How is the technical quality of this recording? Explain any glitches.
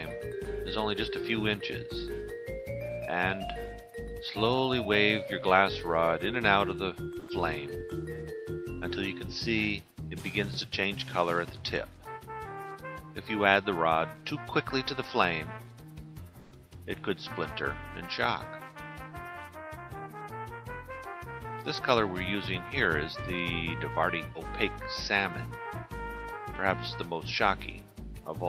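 The recording has two brief transmission glitches, both pointing to a voice detector gating the signal on the sending side.

From 7.19 to 7.27 s, the sound briefly gives way to a flat, steady hiss for about 80 ms before returning mid-stream. This is sound dropped by the voice detector: the sender likely judged this sound to be background and stopped transmitting, so the receiver substituted generated noise. That behaviour fits Opus discontinuous transmission.

From 16.39 to 16.51 s, the background texture flattens into an even, detail-free noise for about 120 ms and drops about 4 dB in level. The background sits about 23 dB below the loudest passages. This is comfort noise in place of the background: the sender likely paused transmission during a lull, and the receiver filled the 120 ms gap with synthetic noise roughly matched to the background's spectrum. The real ambience returns once transmission resumes.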